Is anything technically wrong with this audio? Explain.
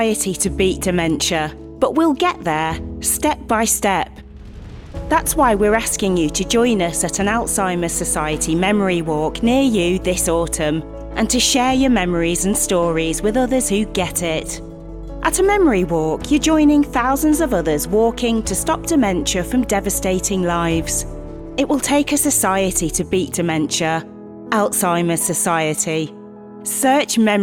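No, nothing technically wrong can be heard here.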